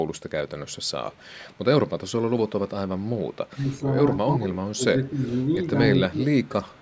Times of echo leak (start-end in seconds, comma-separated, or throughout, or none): 1.11-1.58, 3.20-3.26, 6.44-6.48